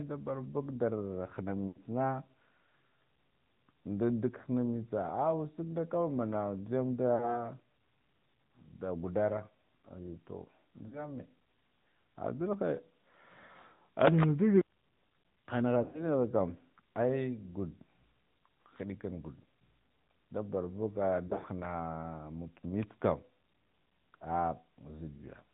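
AMR narrowband mobile codec throughout this speech recording: nothing above 4 kHz survives, and the voice sounds plainly buzzy and synthetic, which fits a mid-rate mode around 10.2 kbps. Lost AMR speech frames at 1.68, 4.42, 7.16, 10.88, 15.84 and 21.28 s: the decoder repeats the last good pitch and vocal tract settings at falling gain, causing brief dips and warbles, drawn out most near 1.68 and 15.84 s.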